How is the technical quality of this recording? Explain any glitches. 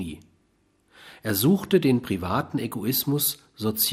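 The recording has one audible problem, present throughout. The speech sounds dull, with a gurgling, granular distortion. That points to MP2 compression as the likely cause, at a low rate around 80 kbps. Too few bits switch upper sub-bands off and coarsely quantise the rest.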